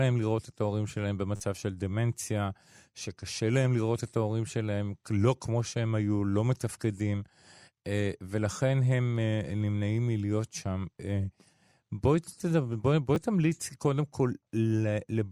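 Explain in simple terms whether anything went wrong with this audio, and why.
Two brief glitches in the speech are a repeated buffer fault: new audio arrived late, so the player replayed the chunk it already had. From 1.36 to 1.40 s, one tiny slice is played four extra times, giving a quick buzzy stutter and skipping roughly 40 ms of sound. At 13.15 s a single extra repeat causes a short click. The repeat length fits a buffer of about 10 ms.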